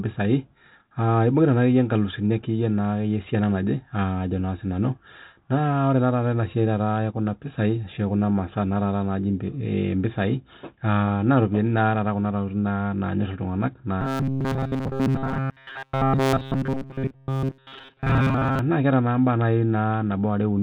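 A speech clip in which, from 14.01 to 18.59 s, the voice collapses into a rigid metallic buzz at 134 Hz that only loosely tracks the talking. This is robotic sound from repeated short buffers, likely caused by audio arriving too seldom: the playback keeps repeating a stretch of about 7.5 ms, and most of the real audio in that span is skipped. The G.726 ADPCM coding at 32 kbit/s leaves nothing above 4 kHz and only light coding damage.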